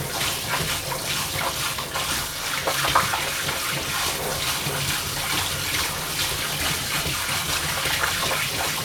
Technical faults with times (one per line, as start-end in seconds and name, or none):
none